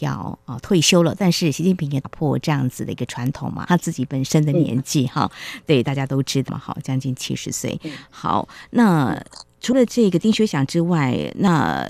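At 2.04, 6.48, 9.72 and 11.47 s the speech jumps ahead where compressed frames were skipped, with whole 26.1 ms frames missing or rejected by the decoder. The first two drop about 150 ms, the last two about 50 ms. Each join is a brief smeared blip, not a click.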